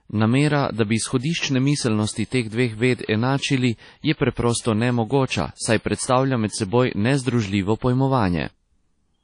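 Across the whole speech clip there is plainly audible transform-codec damage, most likely WMA compression at a low bitrate, consistent with about 32 kbps. Nothing remains above 10.1 kHz, weak spectral detail has been discarded, and a washy, ringing hiss rises and falls with the voice.

From 3.05 to 3.09 s, just before "enačili je preprosto nemogoča", there is pre-echo. Quantisation noise sized for the loud onset is spread back across the quiet 32 ms ahead of it, so a brief hiss precedes the attack and blurs its edge.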